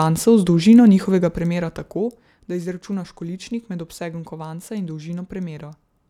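Nothing in this speech recording stands out as a technical fault, so there's really nothing here to flag.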